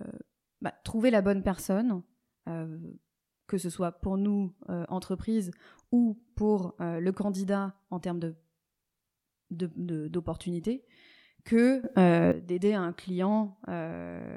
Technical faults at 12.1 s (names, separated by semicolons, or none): sudden gain jump